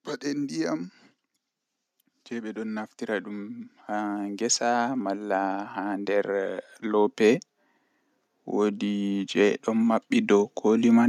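A speech recording with two stretches of automatic gain rising. From 1.98 to 7.48 s the level climbs steadily by about 11 dB, and from 8.32 to 11.04 s it climbs again by about 5 dB. In both passages the voice and the background noise swell together, because the automatic gain control judged the input too quiet and kept raising its gain rather than the source itself getting louder.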